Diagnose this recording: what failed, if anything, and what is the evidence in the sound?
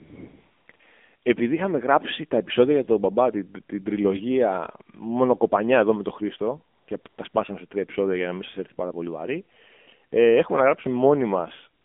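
Codec stage: AMR narrowband mobile codec at 7.4 kbps. The band runs roughly 250 Hz to 3.5 kHz, with buzzy, synthetic vocal texture, unlike a plain low-pass filter, which would sound dull but natural.

Call processing stage: AMR comfort noise at 0.00–0.68 s (before "επειδή είχαμε γράψει τα"), 0.72–0.74, 0.76–0.80, 6.76–6.88 (before "και τα"), 7.02–7.06, 7.08–7.18, 7.30–7.34 (between "και τα" and "σε τρία επεισόδια για"), and 11.82–11.85 s. The phone stopped sending speech frames, and the receiver filled the gaps with smooth synthetic noise. Unlike a dropout, these gaps are filled with noise rather than silence.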